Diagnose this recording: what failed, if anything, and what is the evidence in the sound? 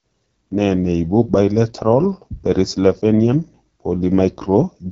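The fault lies in the codec stage: an AMR wideband (HD Voice) codec running at one of its lowest modes, which fits roughly 8.85 kbit/s. Throughout the speech the tone is rough and raspy, with plainly audible coding damage, and nothing is present above 7.5 kHz. At this rate the pulse-driven vocal tract model has too few bits to track the signal cleanly. The top band is filled with shaped noise rather than real detail, which adds to the grainy character.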